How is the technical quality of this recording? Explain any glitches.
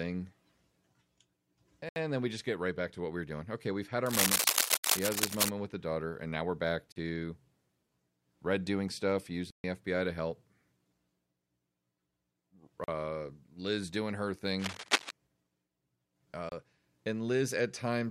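The recording is marred by two recurring faults: six short dropouts to silence and two passages of scratchy noise.

Block of digital silence at 1.89 s (70 ms, just before "then we just get"), 4.78 s (65 ms), 6.92 s (40 ms, after "and now we're back"), 9.50 s (136 ms, after "doing stuff"), 12.84 s (40 ms) and 16.49 s (29 ms). Each time, the output buffer most likely went unfilled and was zeroed. The sound cuts out abruptly, leaving a brief hole.

Cable scratch noise from 4.06 to 5.49 s and from 14.58 to 15.13 s, likely a worn cable or connector being moved so its contact resistance fluctuated rapidly. It is heard as dense, uneven rustling over the speech, a little louder than the speech in the first passage and about as loud in the second.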